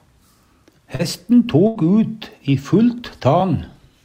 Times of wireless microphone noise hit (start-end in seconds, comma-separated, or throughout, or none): none